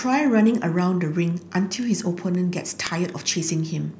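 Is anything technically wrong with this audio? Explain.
Yes. From 0.27 s to 3.91 s, the speech is marked by word clock ticks: around seven sharp clicks, roughly every half second, of uneven loudness. A digital link was read by a receiver on its own, unsynchronised clock, drifting by about a hundred parts per million. Each time the clocks slipped a sample, one was dropped or repeated. On a spectrogram, each tick is a thin vertical broadband line; on the waveform, a single-sample step or spike.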